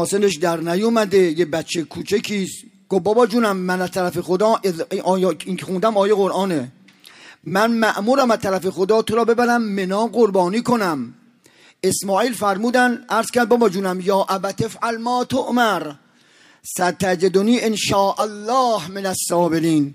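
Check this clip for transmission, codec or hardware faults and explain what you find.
One codec fault is present: one event of corrupt frame concealed between 7.44 and 7.52 s. For about 86 ms the decoder covers the damaged audio. That length fits roughly four AAC frames. The decoder detected damaged bits, discarded those frames, and filled the gap by muting or substituting a scrambled version of the previous spectrum. A spectrogram shows a narrow vertical band of faded or smeared energy with blurred edges.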